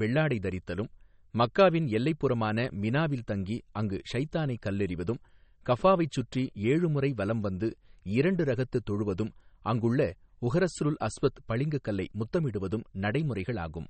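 MP3 compression artefacts run through the whole speech clip: nothing remains above 8.4 kHz, and the sound is watery and swirly, with smeared attacks and metallic chirps on s sounds. This is likely a starved MP3 encoder dropping treble and zeroing weak frequency lines, which fits a bitrate of about 32 kbps.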